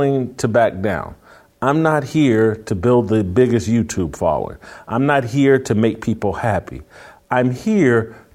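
Nothing in the speech stood out as a technical problem on listening.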